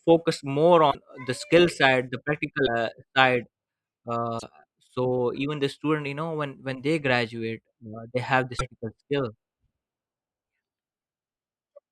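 Speech with four brief garbled breaks at 0.90–0.95 s, 2.65–2.68 s, 4.38–4.43 s and 8.58–8.61 s, each spanning one or two 24 ms frames. Unlike a plain dropout, the sound skips ahead and corrupts briefly, likely a broken MP3 bit reservoir after frames were cut out.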